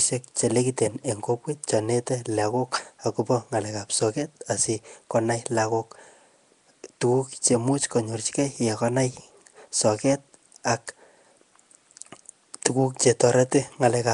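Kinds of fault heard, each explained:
Nellymoser compression: The speech has a rough, hissy halo and a smeared, underwater quality, with nothing above 10.6 kHz. The cause is likely the Nellymoser Asao codec. Its coarse block coding fills starved bands with noise, and the damage fits roughly 44 kbps.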